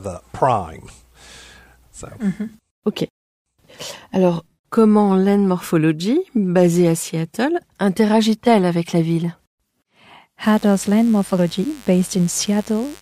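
At 10.42 s a steady, raspy buzz appears under the speech and continues to the end of the clip, sitting roughly 25 dB below the speech level. This is mains buzz on a 50 Hz supply. Sharp switching spikes from a dimmer, a rectifier or an unshielded line get into the signal path twice per mains cycle, producing a dense stack of 50 Hz harmonics that reaches up to several kHz.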